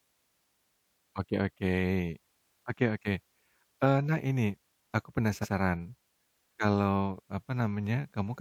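At 5.41 s, right after "eee nah ini aku", the speech stutters because of repeated frames. A block of about 93 ms, which fits a pair of compressed frames, was decoded and then played a second time, adding 92.9 ms to the clip. The fragment is heard twice in a row. On a spectrogram, the same harmonic and formant pattern appears twice side by side up to 5.51 s. In the waveform, an identical stretch repeats, with its seam at the start of the copy.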